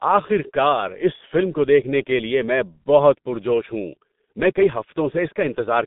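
From start to end, the speech carries heavy G.723.1 codec damage. Its sound points to a rate of roughly 6 kbit/s, with the line band running from about 150 Hz to 3.7 kHz and nothing above 3.8 kHz. The codec models the voice in coarse 30 ms frames and updates that model slowly, so the speech comes across muffled and hoarse. Consonant onsets smear together instead of landing cleanly, and the missing top end removes sibilant detail.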